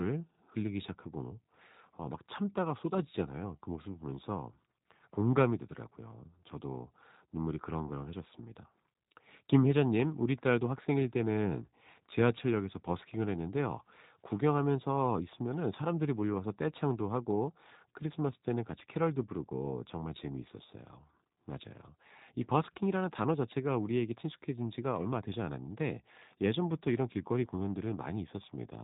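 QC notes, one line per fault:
throughout, G.729 codec: speech is rebuilt from a vocal tract filter, pitch predictor and sparse pulses at what sounds like 8 kbit/s, giving plainly audible roughness and a hard ceiling near 3.8 kHz.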